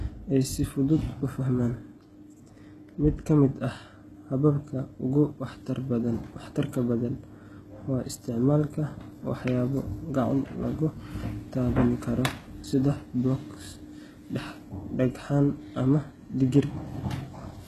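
HE-AAC compression, throughout: the treble sounds copied upward from lower bands and stops near 12.3 kHz. This plainly audible grit likely comes from spectral band replication at roughly 16 kbps.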